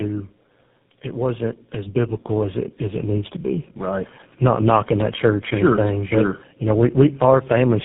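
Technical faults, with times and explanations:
Throughout, tandem speech coding: the speech has been squeezed through three low-rate speech codecs in a row, which sounds like GSM full rate, then an AMR-NB leg, then GSM again. Each one re-codes the last one's damage, so it's rough, muffled and warbly, with nothing above 3.8 kHz.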